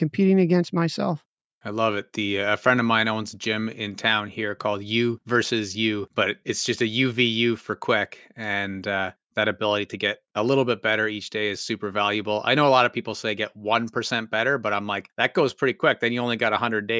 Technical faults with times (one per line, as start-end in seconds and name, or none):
none